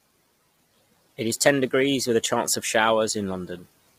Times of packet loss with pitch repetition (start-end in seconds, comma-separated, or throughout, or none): none